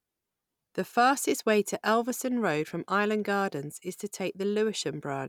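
Listening to the speech recording, nothing technical stood out as wrong at any point.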